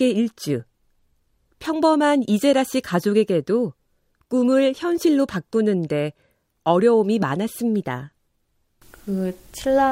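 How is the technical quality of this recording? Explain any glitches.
The recording has one fault running through almost all of it. Clock slip clicks occur from 0.24 s to 9.79 s, faint ticks roughly every 0.15 s, around 70 in all. At each tick a single sample is dropped or repeated. The likely cause is two devices running on unsynchronised clocks, and the spacing of the ticks fits a clock error of around 150 ppm.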